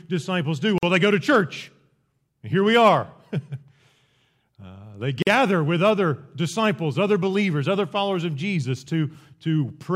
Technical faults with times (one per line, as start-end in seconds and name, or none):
0.78-0.83 gap at a join of encoded pieces
5.22-5.27 gap at a join of encoded pieces